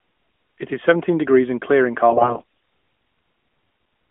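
A speech recording over an AMR narrowband mobile link, where from 2.10 to 2.43 s AMR bit errors flip around 15 percent of the weakly protected bits, misplacing excitation pulses so the voice turns hoarse, scratchy and gargly while keeping pitch and level.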